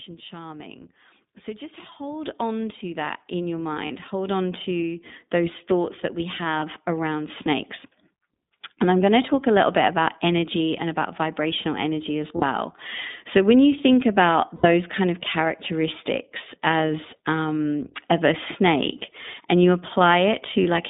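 iLBC codec coding runs through the whole clip. The speech sits in a narrowband line of roughly 150 Hz to 3.7 kHz, so nothing bright survives above that. Each 20 ms frame's excitation is coded on its own, and the damage is plainly audible: voices come out rough and slightly synthetic, with a coarseness consistent with iLBC's 15.2 kbps mode.

The first microphone volume stepped up event comes at 2.25 s. The input gain jumps by about 7 dB in one step, lifting speech and background together. At 3.27 s, between "on to that" and "in your", a second step adds about 3 dB, as the software again judges the microphone too quiet and raises the device level abruptly instead of easing it.

Lost iLBC frames appear at 3.86 to 3.91 s, a 40 ms gap consistent with two dropped 20 ms frames. The decoder fills it by repeating the last pitch cycle blended with noise, so the gap sounds like a brief held, buzzy vowel.

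At 4.29 s, just before "on to those thoughts", the microphone volume steps up by a further 3 dB, another sudden jump in overall level.

More lost iLBC frames follow: 20 ms at 6.60 s, 60 ms at 12.36 to 12.44 s, and 80 ms at 14.56 to 14.66 s between "when you think about" and "kind of characteristics as". The last loss is a single 20 ms frame at 18.08 s. Because iLBC frames stand alone, the speech recovers almost immediately after each gap.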